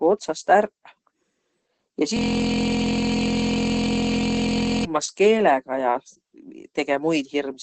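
Opus compression runs throughout, likely from Opus in its speech (SILK) mode at a low rate, which the sound points to at around 12 kbps. Nothing remains above 8.6 kHz, and the speech sounds muffled and hoarse, with heavy codec damage.

A system hang loop runs from 2.17 to 4.85 s. The system froze while the sound hardware kept replaying one 23.22 ms piece of its ring buffer, which fits a 1024-sample buffer. That piece repeats over a hundred times, heard as a steady buzz at 43.1 Hz.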